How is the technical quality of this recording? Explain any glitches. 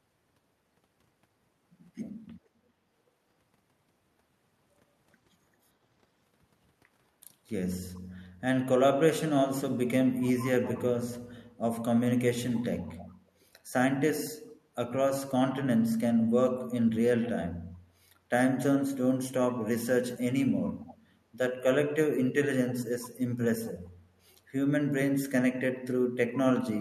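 The recording has two recurring glitches, both tied to echo cancellation on a speakerphone-style call.

Background gated by the echo canceller occurs at 2.67–2.76 s, 14.53–14.61 s and 18.19–18.30 s. While the far end played through the loudspeaker, the canceller pulled the microphone down by about 9, 11 and 13 dB, so the room tone briefly drops out. On a waveform or spectrogram this shows as short notches in the noise floor.

Echo leak is heard at 10.67–10.78 s, 12.97–13.14 s and 20.66–20.95 s. These are faint copies of the speech arriving 399 ms later, likely residue the other side's echo canceller failed to remove. The first is noticeably stronger than the other two. A spectrogram shows a weak, delayed duplicate of the speech pattern.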